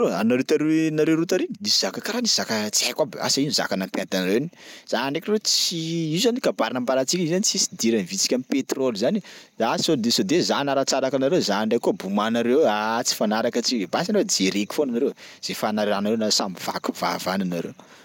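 No technical faults are audible.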